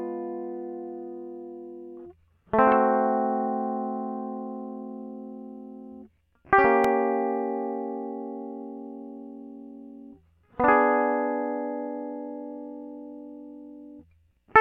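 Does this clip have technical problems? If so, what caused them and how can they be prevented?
Yes. There is a repeated buffer at about 6.84 s in this music. It is heard as a single brief click rather than a stutter. New audio did not reach the output in time, so the device played its last block once more. That block lasts only 1.33 ms, which fits a 64-sample buffer. The repeat has a hard join, and roughly a millisecond and a half of audio is lost. A larger playback buffer would prevent this underrun.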